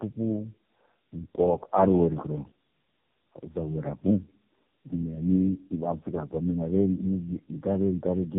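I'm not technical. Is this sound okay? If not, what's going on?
No, not quite. This speech has tandem speech coding throughout. The call passed through three phone-network speech compressors in a row, each squeezing the already-squeezed result again, so the speech sounds rough, muffled and warbly, with nothing above about 3.8 kHz.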